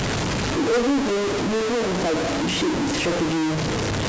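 A speech recording carrying harsh, buzzy distortion from start to finish, the signature of a stuck bit. One data bit appears held at a fixed value, likely from a broken data line or converter fault, so roughly half the samples are displaced by a step of around -20 dBFS. Because that bit also flips with the sign of small values, the pauses between phrases fill with a gritty noise floor rather than falling silent.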